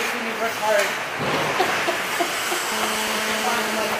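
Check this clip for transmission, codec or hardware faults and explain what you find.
One interference fault is present. GSM phone buzz runs from 2.72 to 3.95 s. A 2G handset on a call nearby transmits in bursts 217 times a second, and the audio circuitry rectifies those radio pulses into a steady, hard, raspy 217 Hz buzz full of harmonics, unrelated to the sound and about 5 dB below it.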